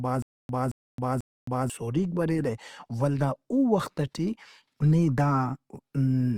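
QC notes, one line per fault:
0.0–1.7 s, stutter with silent gaps: the speech is already caught in a loop when the clip opens. A fragment about 0.22 s long plays, then drops into dead digital silence for about 0.27 s, and the same fragment returns, repeating three times on an even cycle of roughly 0.49 s. The likely cause is a stalled player or stream that replayed its last buffered piece at each retry and then ran empty, so whatever should have filled those gaps is gone.
throughout, Opus compression: the speech carries a plainly audible grainy, rough coating. Tonal parts turn noisy rather than swirling, and the texture stays even across the spectrum instead of showing holes. The band still reaches up to about 20.2 kHz, so the loss is in fineness, not bandwidth. This likely comes from Opus in its music-oriented CELT mode at a low rate, which fits roughly 24 kbps, where starved bands get filled with folded or noise-like content.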